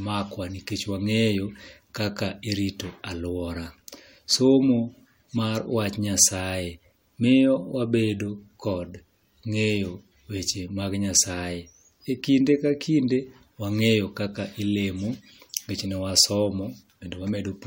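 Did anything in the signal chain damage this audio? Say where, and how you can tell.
No, nothing in the signal chain damaged this audio.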